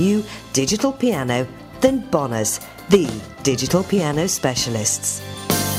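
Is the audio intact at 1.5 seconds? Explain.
Yes, the audio is intact at 1.5 seconds, with nothing there that breaks the continuity of the sound.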